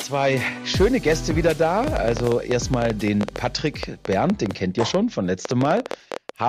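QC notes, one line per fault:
1.84–6.30 s: train of clicks, some 40 matching pops at an uneven 9.2 per second, about 15 dB above the sound; likely interference. Matching shapes rule out crackle.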